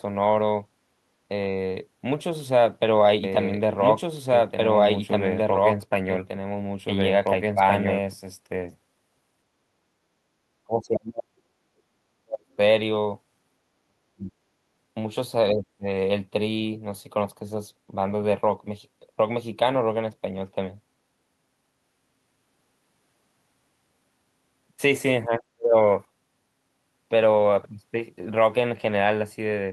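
From 3.24 to 8.14 s a doubled audio track runs underneath: the speech repeats about two seconds late at roughly equal loudness, starting and stopping abruptly. Unlike room echo or acoustic feedback, the copy is full-band, dry and undecayed, likely a second capture path or misaligned edit.

Speech suppressed in double talk follows at 9.66–10.03, 10.65–11.37, 11.73–12.58, 13.87–14.32, 15.53–15.87 and 25.26–25.76 s. The speech sinks deeply, most often nearly to silence, and more shallowly at 15.53 s, likely because an echo canceller could not separate this side's talk from the overlapping far-end echo and turned both down. Unlike packet-loss gaps, these are gain dips lasting a few hundred milliseconds.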